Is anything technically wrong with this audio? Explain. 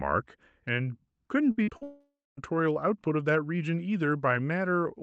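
Yes, there are two network faults right next to each other.

From 1.51 to 1.83 s there's repeated packet loss with a robotic sound. Four short gaps, the longest about 59 ms, got patched by stretching the previous sound, so about half that stretch sounds choppy.

Then from 1.83 to 2.39 s the speech gives way to a buzz or hiss that fades into about 0.24 s of silence. It picks up again with a chunk simply gone. That's most likely a long network dropout.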